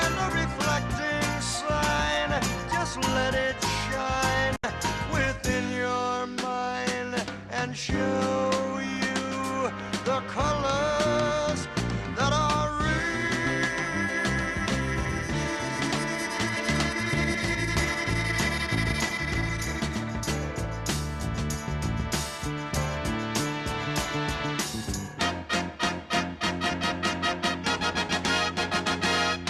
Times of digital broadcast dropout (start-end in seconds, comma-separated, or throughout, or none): 4.56-4.64